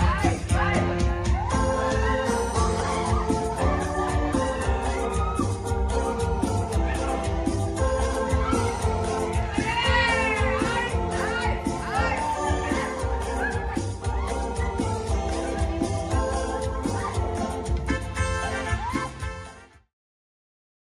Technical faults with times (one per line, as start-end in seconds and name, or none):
none